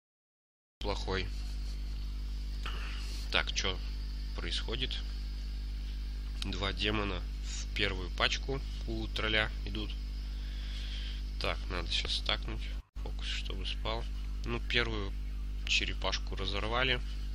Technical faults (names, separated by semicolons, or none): cut-off start